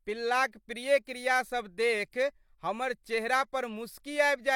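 At 2.10 to 2.13 s, a pre-echo smears a sharp speech onset. The transform codec spread quantisation noise across the whole block, so noise meant for the loud attack also filled the silence just before it. This is heard as a short hiss of about 27 ms leading into the onset, which loses its crispness. Unlike reverb or a true echo, the smear comes before the attack rather than trailing after it.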